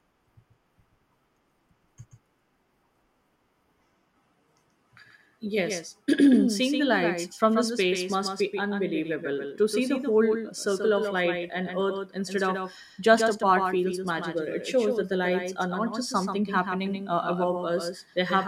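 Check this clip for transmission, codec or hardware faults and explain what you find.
One fault runs through the whole clip: a doubled audio track. Every stretch of speech is followed by a full-band copy about 150 ms later, roughly 5 dB quieter, with no decay or room colour, so it sounds like a hard slapback echo. The cause is likely a second capture of the same signal arriving over a slower path and being mixed back in.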